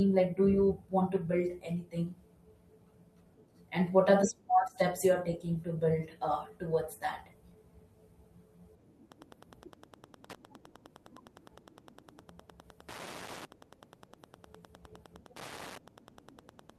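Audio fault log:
9.03–16.78 s, Wi-Fi interference: from 9.03 s to the end of the speech, a steady ticking runs at a little under ten clicks per second, sitting roughly 25 dB below the speech. A nearby Wi-Fi radio's beacon, repeating every 102.4 ms, is being picked up and rectified by the audio circuitry, turning each radio burst into a short audible pulse. On a spectrogram this shows as evenly spaced thin vertical broadband lines; the waveform carries a regular train of small spikes.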